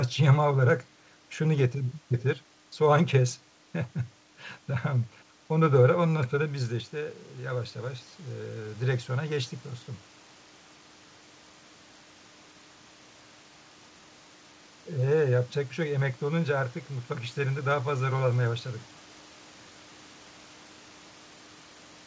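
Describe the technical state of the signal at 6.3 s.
At 6.3 s the signal is inside an automatic gain rising episode that runs from 6.13 to 9.6 s. The talker drifts away from the microphone around 6.5 s, and the input level falls by about 11 dB. The gain control reads this as too quiet and raises its gain by about 4 dB over roughly three and a half seconds. Voice and room noise swell up together, only partly restoring the lost level.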